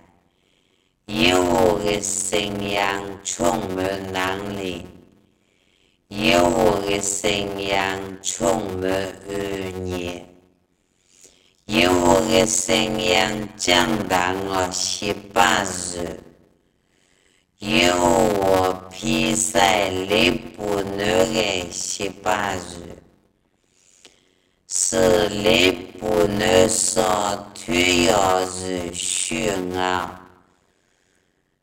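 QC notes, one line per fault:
Throughout, block size mismatch (padded): there's a steady buzz at about 91.9 Hz, and everything plays at roughly half speed (0.533x) with normal pitch. This points to 256-sample writes landing in larger read blocks, with each block's remainder filled by a silent gap.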